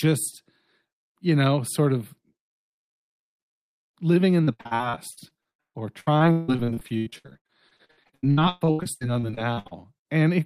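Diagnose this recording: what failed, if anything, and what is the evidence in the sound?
The network path repeatedly dropped or delayed packets from 4.43 s to 9.73 s, beginning just after "living in". This is repeated packet loss, which produces a robotic sound. Dozens of short holes opened in the stream, the longest about 161 ms. Each one was patched by stretching the last received sound, so about 42% of that span is synthetic fill. The result is choppy, robotic audio with fragments missing throughout the stretch.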